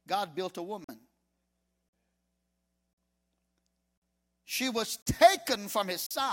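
A speech clip with a gap between chunks: six hard-edged 44 ms silences at 0.84, 1.89, 2.93, 3.98, 5.02 and 6.06 s, one after every 1 s chunk. On a waveform or spectrogram they appear as evenly spaced blank vertical strips, likely from padding or late chunk starts.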